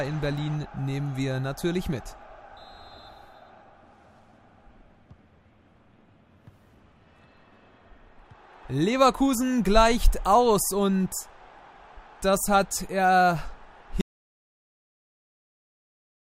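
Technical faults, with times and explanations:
14.01 s to the end, audio dropout to silence: the sound cuts off abruptly mid-flow and the last 2.3 s are dead digital silence with no room tone. The input was likely lost, through a disconnection, failed link or mute, while recording continued writing silence.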